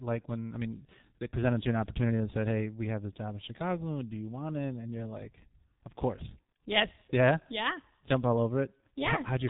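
From start to finish the speech has passed through a G.723.1 codec running at a very low rate, which fits roughly 6 kbit/s. Nothing survives above about 3.8 kHz, so the voice is muffled, and the heavy coding leaves it hoarse with smeared consonants.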